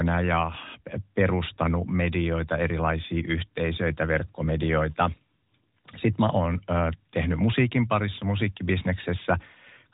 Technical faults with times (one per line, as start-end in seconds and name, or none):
none